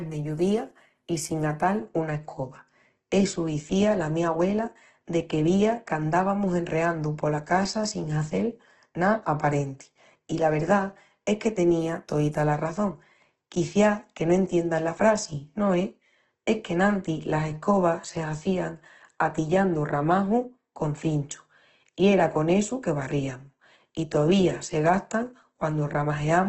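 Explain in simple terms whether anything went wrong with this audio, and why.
Yes, something went wrong for the whole clip. The speech sounds rough, grainy and hissy, and the top end is dull, with nothing above 12 kHz. The likely cause is heavy Opus compression, which squeezed the sound so hard that missing detail was patched with noise.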